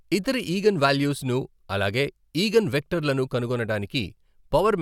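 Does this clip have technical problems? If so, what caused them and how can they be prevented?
No, there are no technical problems in this clip.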